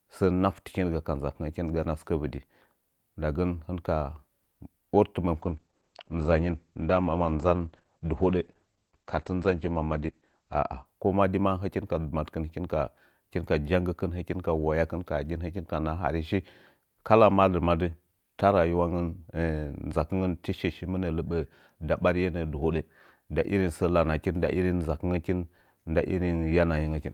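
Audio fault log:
5.35–10.91 s, call bitrate drop: the audio turns rough and muffled as bandwidth falls from 20 kHz to 8 kHz for about 5.2 s. The coarser coding fits the encoder dropping from around 48 kbps to 10 kbps after a bandwidth-estimate dip.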